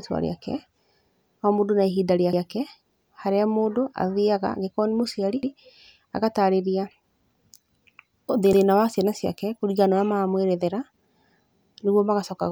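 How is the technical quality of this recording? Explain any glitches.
The speech is marred by overlapping chunks: each 3-second chunk starts 100 ms before the previous one ended, so that slice replays as a stutter at 2.33, 5.43, 8.53 and 11.63 s.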